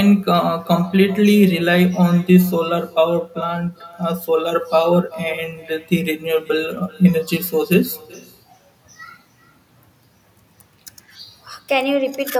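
It's a speech recording, and the whole way through it carries an echo with no canceller. Every phrase comes back a bit under half a second later as a faint copy, about 23 dB below the talker, sounding thinner than the original. That's the far end playing the call out of a loudspeaker into its own microphone, with nothing removing it, so the talker's voice returns after the network round trip.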